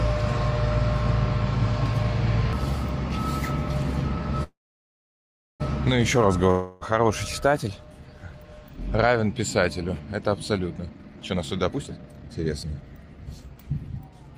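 At 4.43 s a call audio freeze begins. The last sound carries on as a fading buzz, then about 1.06 s of silence, and at 5.62 s the audio resumes from where it stopped. Delayed packets likely drained the jitter buffer.

From 6.51 to 6.83 s a long network dropout is covered by a decaying buzz with no silence. The 0.3 s of audio behind it is likely lost for good.

From 10.79 s to the end, a jitter buffer speed-up plays the audio at 132% speed with unchanged pitch. Roughly a second of short pitch-period pieces has been cut to shed excess delay, so the sound comes across as hurried.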